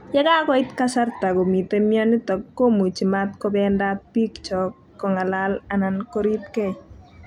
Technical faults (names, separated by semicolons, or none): none